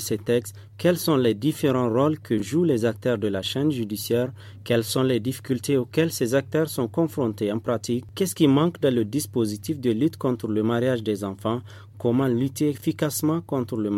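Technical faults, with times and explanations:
2.38–2.42 s and 12.78–12.82 s, chunks out of order: in each spot a 20 ms block of audio arrives one block late and plays after the block that should follow it, so two short slices swap places. Nothing goes missing and nothing repeats, which separates this from a dropout or a stutter. The brief jumble is instead bounded by hard joins where the mismatched edges meet.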